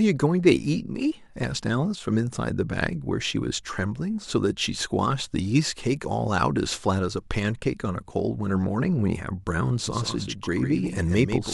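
At 9.87 s a doubled audio track cuts in and runs to the end of the clip: a second, full-band copy of the speech trails the original by around 150 ms, roughly 10 dB quieter. It likely comes from the same signal being picked up again through a slower path. Unlike room echo or reverb, the copy has no decay tail, no room colour and no repeats. It switches on abruptly rather than building up.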